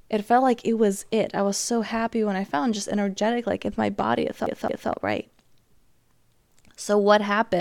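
A CD stuck on one turn hits this speech clip from 4.46 to 4.90 s, just after "in my body it": a 0.22 s slice plays twice, each return marked by a brief mute, as a scratch knocks the laser back one track per rotation.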